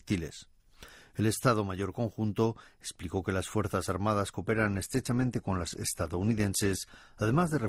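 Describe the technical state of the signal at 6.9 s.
At 6.9 s the speech sits inside a stretch of adaptive stream at a lower bitrate, running from 4.41 s to the end. The quality drops abruptly with no gap, nothing remains above 12.2 kHz, and coding artefacts thicken, consistent with a switch from roughly 64 to 16 kbit/s Opus.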